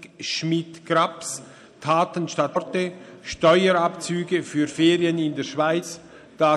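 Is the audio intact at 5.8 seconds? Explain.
No. At 5.82 s there is damaged data in the compressed stream: a brief blip where the decoder hits corrupted bytes, misreads or drops the affected frame, loses sync and resumes at the next valid frame header.

The same moment also carries the clip-wide MP3 compression damage, plainly audible as watery, swirly high-frequency texture and softened attacks. That sound is likely the result of a low bitrate, consistent with roughly 64 kbps, where the encoder cuts the treble and drops weak spectral lines from frame to frame.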